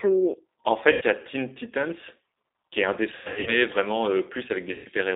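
A French speech clip coded with the G.729 codec, here the G.729A variant at 8 kbit/s. The line passes only about 300 Hz to 3.7 kHz, so the sound is narrow and muffled. The codec rebuilds each 10 ms frame from a vocal tract filter, a pitch predictor and a few pulses. That leaves the voice plainly rough and synthetic. The damage is audible from start to finish.

VoIP packet loss concealed by the speech codec occurs three times. The first is at 0.92 to 1.03 s, just before "il y a". About 90 ms is missing, which fits three lost 30 ms packets. The second follows "qui est un", from 3.16 to 3.63 s. There, 240 ms is lost in pieces across 300 ms, with runs up to 90 ms. The third, at 4.73 to 4.87 s, loses 120 ms. In each gap the decoder repeats its last pitch and filter at falling gain. The sound smears into a fading buzz or coloured noise. It stays weak briefly after packets return.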